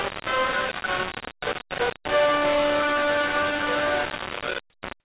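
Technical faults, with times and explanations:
Throughout, low bit depth without dither: a coarse, grainy distortion rides on every sound, almost as loud as the sound itself, and quiet stretches collapse to silence or sputter between steps. It is likely caused by rounding to very few levels, around 3 bits, with no dither, so the error follows the signal rather than forming a steady hiss. Unlike the call path's coding noise beneath the 4 kHz band limit, this grit tracks the signal's level.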